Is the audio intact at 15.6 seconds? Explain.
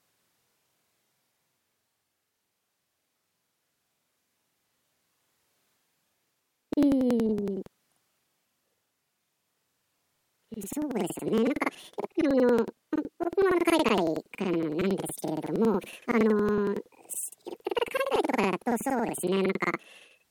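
No. At 15.6 s the speech carries the planar audio read as interleaved fault that runs through the whole clip. Each block of about 93 ms, which fits a 4096-sample block, plays its left half then its right half at double speed. The speech sounds an octave high with a 10.8 Hz flutter.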